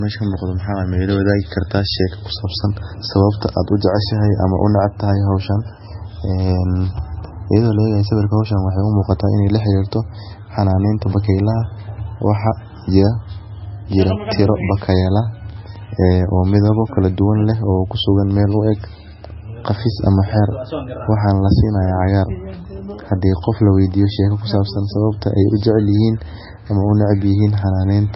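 From start to finish the speech sounds watery and swirly, with a metallic chirping on s sounds and softened consonant onsets, and nothing comes through above 5.6 kHz, leaving the treble dull. This is likely heavy MP3 compression at a bitrate so low, around 17 kbps, that the encoder cuts everything above the fixed cutoff and drops weaker frequency detail, which flickers on and off from frame to frame.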